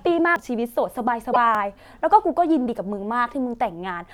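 Speech with three abrupt skips at 0.36 s, 1.55 s and 2.69 s, each where the sound jumps ahead with no gap, losing around 70, 20 and 40 ms respectively. These are likely dropped buffers (overrun): audio was overwritten before being read and the surrounding material spliced together. Between 1.32 and 1.37 s there is a short jump followed by disrupted audio spanning a couple of 26.1 ms frames, likely a broken MP3 bit reservoir, where frames after a cut borrowed bits from data that no longer belongs to them.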